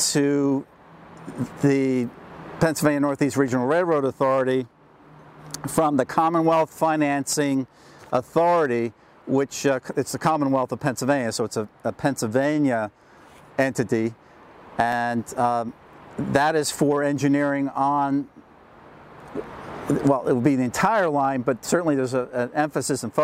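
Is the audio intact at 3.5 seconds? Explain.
No. A block of digital silence occurs at 3.48 s, a gap of about 1.3 ms, which fits a 64-sample block of zeros. The output was momentarily fed empty values in place of the audio, most likely because the buffer was not filled in time. The sound drops out and returns abruptly with no fade, and because the hole is far shorter than 15 ms it is heard as a brief tick or dip, not as audible silence.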